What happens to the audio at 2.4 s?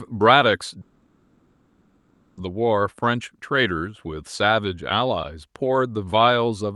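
At 2.39 s the audio resumes after a long network dropout from 0.81 s, likely lost packets; a fading concealment buzz filled the gap, and about 1.56 s of speech is missing.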